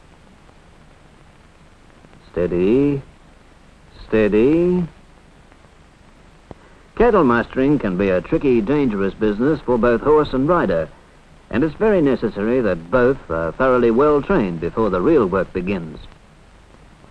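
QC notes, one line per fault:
5.63–9.58 s and 12.99–15.18 s, Bluetooth SBC bit pool drop: twice the sound turns dull and gritty, then recovers. The encoder cut its bit budget to keep a congested link flowing, so the highest sub-bands get little or nothing and the remaining bands are quantised coarsely. That strips the treble and lets a granular noise ride over the audio. The loss is consistent with the bit pool falling from 28 to about 13, roughly 102 kbps.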